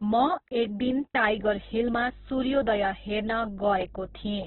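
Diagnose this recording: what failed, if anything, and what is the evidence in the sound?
Throughout, the speech sounds rough, grainy and boxed-in, with nothing at all above about 4.1 kHz. That hard ceiling and the gritty texture of voiced sounds point to a codec stage, most likely Opus compression working in its CELT music mode at a rate near 8 kbps. Starved of bits, it keeps each band's energy but fills the detail with folded or noise-like content, and the narrowband limit removes the upper spectrum entirely.

From 1.27 s, just after "एक दिन", a steady low drone at 50 Hz enters and stays to the end, sitting roughly 20 dB below the speech. It is mains hum, a fault in the analogue wiring. A ground loop or a nearby transformer is letting the power-line frequency couple into the signal path.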